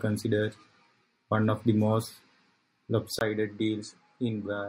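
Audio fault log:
3.19 s to end: input switched to a poorer device, likely. After a 20 ms gap the speech turns duller and a few decibels quieter over a new faint noise floor. A spectrogram shows everything above 9.3 kHz cut off, and the waveform shows a brief flat dropout.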